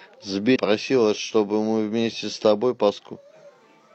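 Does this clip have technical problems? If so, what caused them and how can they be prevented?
Yes. Damaged data in a compressed stream causes short glitches at 0.51–0.56 s and 2.93–3.00 s. Corrupted bytes make the decoder misread frames and lose sync until it finds the next frame header. Verified, checksummed transfer and storage of the file prevent it.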